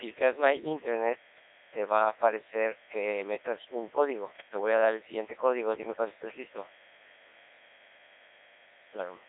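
A mains buzz sits under the speech for the whole clip, a steady, raspy tone built on 60 Hz. Its edge comes from sharp switching spikes, such as those from a dimmer or rectifier or from a missing shield, entering the signal twice per mains cycle. That pulse train carries harmonics of 60 Hz well up into the kilohertz range. The buzz sits roughly 25 dB below the speech.

The speech is also carried through a Codec 2 vocoder, and the damage is heavy. Rather than keeping the waveform, this kind of coder sends only pitch, voicing, energy and a coarse spectral envelope, and the decoder rebuilds the voice from sine waves. The result here is robotic and buzzy, confined to a 300 Hz to 3.7 kHz band. The very low bit budget fits the 1.6 kbit/s mode.

From 4.35 to 4.48 s, about 0.14 s, bit errors on digital voice radio break the output. Flipped bits, at a low but damaging rate, corrupt the frame parameters. 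Because each bit steers the pitch, level, voicing or spectrum of an entire frame, the voice jumps abruptly in pitch and loudness and changes tone colour, briefly turning into a warbling, bleeping burst. The length of the burst suggests roughly three corrupted frames.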